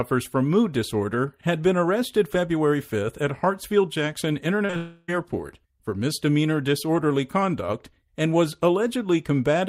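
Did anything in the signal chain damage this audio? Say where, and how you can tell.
Yes, in the network stage. Short concealed packet loss hits twice in a row, from 4.65 to 4.71 s and 4.71 to 4.74 s, each gap patched by continuing the preceding sound. It is heard as a brief smear, and a spectrogram shows smoothed, repeated harmonics where detail should be.

Straight after, from 4.76 to 5.10 s, the real speech is replaced by a synthetic continuation that decays over about a third of a second without ever reaching silence. This is likely a long network dropout. The waveform shows a fading, repetitive envelope, and the spectrogram shows blurred, stretched bands.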